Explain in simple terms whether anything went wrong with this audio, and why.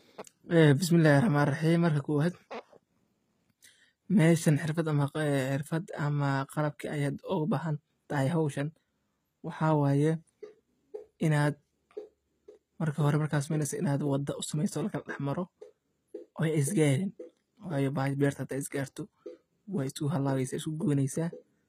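Something did go wrong. The speech carries plainly audible HE-AAC compression damage for the whole clip. The encoder likely kept only the lower sounds and rebuilt the treble by copying them upward. So the highs sound metallic and false. Nothing remains above 14.9 kHz.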